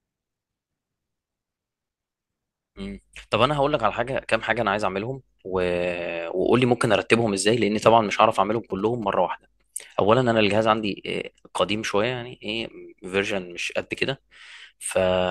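From 7.61 to 9.04 s, a galloping dit-dit-dit pattern of short buzzes cuts across the speech, sitting roughly 20 dB below it. This is GSM signalling bursts: a nearby 2G phone is exchanging brief groups of radio bursts with the network rather than holding a call. The audio circuitry rectifies that radio energy into sound, so each group arrives as a buzz pulsing at about 217 Hz.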